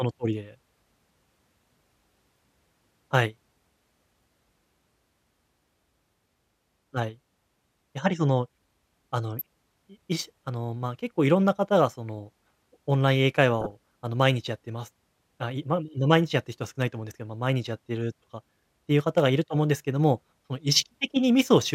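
DAB burbling appears at 9.39 to 9.41 s and again at 13.60 to 13.72 s in this speech recording. Weak reception let bit errors, on the order of a few tenths of a percent, slip past the error correction into the MP2 data. Corrupted samples put short blips of noise into single sub-bands. Across seven and then six frames, this produces brief burbling over the voice.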